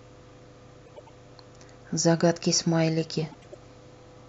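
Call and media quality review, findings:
Garbled flutter, 0.86–1.10 s and 3.31–3.55 s. Frames out of order: adjacent ~105 ms runs swapped, no time lost, which fits four-frame blocks.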